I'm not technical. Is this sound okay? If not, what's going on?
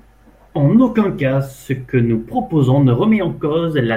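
Yes, there's nothing wrong with this recording.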